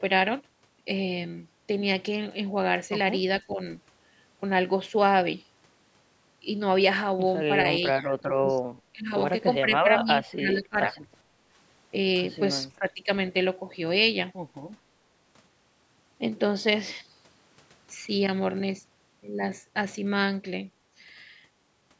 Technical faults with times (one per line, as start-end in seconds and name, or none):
3.41-3.59 speech suppressed in double talk
7.82-8.51 speech suppressed in double talk
8.92-9.12 speech suppressed in double talk
9.60-10.09 speech suppressed in double talk
10.34-10.95 speech suppressed in double talk
11.24-11.45 background gated by the echo canceller
12.79-13.09 speech suppressed in double talk